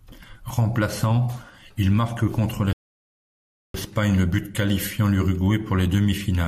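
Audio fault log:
2.73–3.74 s, rebuffering stall: after "il marque contre" the speech halts in clean silence for about 1.01 s, then picks up exactly where it stopped with "le but qualifiant". Unlike a dropout, no sound is skipped. Playback simply waited for data, adding time.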